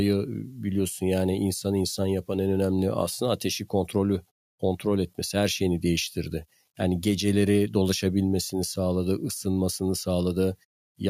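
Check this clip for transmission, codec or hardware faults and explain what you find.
No transmission, codec or hardware faults can be heard anywhere in the speech.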